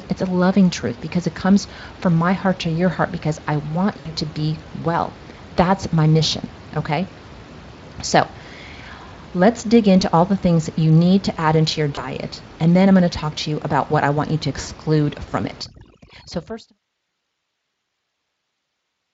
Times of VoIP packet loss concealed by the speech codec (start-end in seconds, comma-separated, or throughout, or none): 3.99-4.13, 9.99-10.03, 11.95-12.04, 14.61-14.70